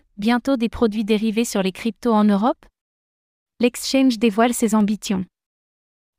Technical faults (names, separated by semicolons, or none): clock drift buffer slips